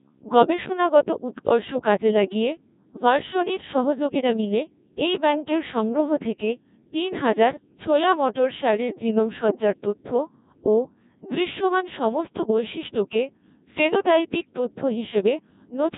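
The speech throughout sounds robotic and buzzy, with nothing above about 3.8 kHz. That is the signature of a Codec 2 vocoder, which sends only pitch, voicing, energy and envelope and rebuilds the voice from sine waves. The heavy damage fits a rate near 1.6 kbit/s.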